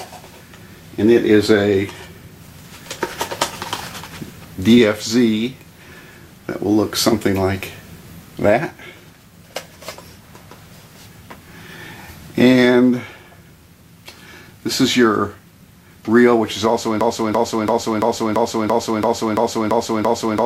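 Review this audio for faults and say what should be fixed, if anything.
A stall in the player, encoder or stream likely left it resending its last buffered fragment: a broken-record loop from 17.01 s to the end, where a 0.34 s piece repeats exactly, back to back, ten times, replacing the audio that should follow. Add stall detection that mutes or reconnects instead of replaying stale buffer contents.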